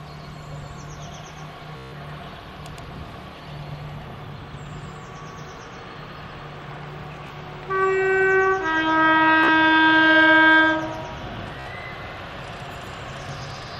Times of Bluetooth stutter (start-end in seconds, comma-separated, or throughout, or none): 1.77-1.93, 7.27-7.32, 9.44-9.49, 11.60-11.67